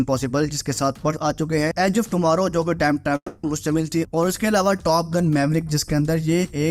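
At 3.16 s the sound smears into a fading buzz, goes silent briefly, then resumes at 3.44 s with about 0.27 s missing, likely a long network dropout.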